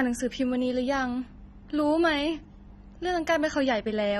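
From start to finish the speech sounds dull and smeared, and the damage is plain to hear. There's nothing above 14.3 kHz, so the top end is sliced clean off. That points to AAC compression, likely AAC-LC run at a low bitrate around 24 kbps. At that rate the encoder drops the cut-off and quantises the remaining frequency lines coarsely against its hearing model, and the detail it throws away leaves that blurred, lifeless texture.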